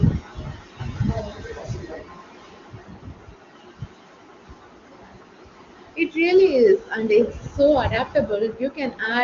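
No technical faults can be heard anywhere in this speech. The sound is carried by the AMR wideband (HD Voice) codec, which leaves at most faint coding traces and nothing above roughly 7.3 kHz, consistent with one of its higher bitrates.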